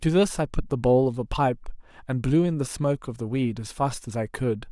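Speech, with no technical fault anywhere in the recording. Nothing in it calls for a time or a cause to be given.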